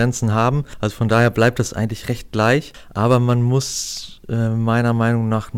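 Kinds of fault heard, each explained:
Hard clipping: the speech is driven past what some stage can pass, so its peaks get sheared flat, which throws harsh harmonics high up the spectrum. Here it comes as crackle on peaks on four stretches: 0.00 to 0.49 s, 1.02 to 1.60 s just before "eigentlich recht", 2.39 to 2.54 s right after it, and 3.05 to 3.33 s leading into "muss äh". The overload runs from about 3 to about 5 dB.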